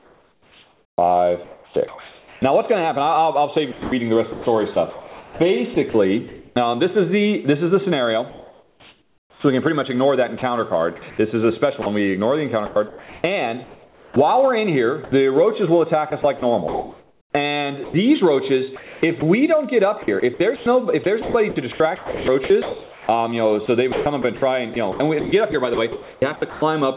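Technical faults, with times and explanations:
0.00–2.42 s, sound chopped by the voice detector: the audio breaks up, and about 1.84 s of it gives way to a synthetic hiss, likely because the sender's voice detector kept switching transmission off and comfort noise filled the gaps.
3.72–6.56 s, sound chopped by the voice detector: the same choppy replacement by comfort noise, covering about 1.2 s, likely from the detector gating the quieter parts.
8.30–26.96 s, sound chopped by the voice detector: repeated dropouts across this long stretch replace about 5.9 s with comfort noise, likely from the detector repeatedly cutting transmission. The lack of anything above 4 kHz fits a G.711 call codec.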